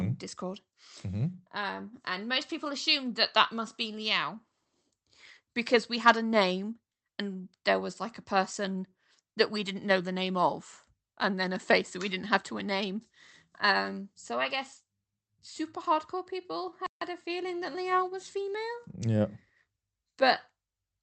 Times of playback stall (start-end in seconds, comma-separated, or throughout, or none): 16.86-17.01